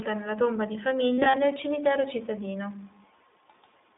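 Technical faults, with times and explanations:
Throughout, iLBC codec: the sound sits in a narrow 250 Hz to 3.6 kHz band with a plainly rough, slightly synthetic edge, which fits iLBC's 20 ms frame mode at about 15.2 kbps.
1.15 to 1.37 s, lost iLBC frames: about 120 ms goes missing in short bursts across that span. The decoder patches each gap with a held, buzzy repeat of the last pitch cycle, then snaps straight back to normal.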